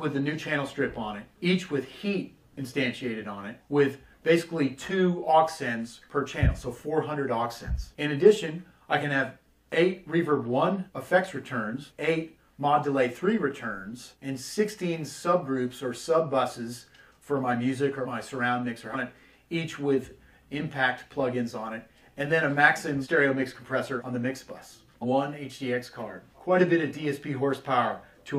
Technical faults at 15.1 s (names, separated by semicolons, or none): none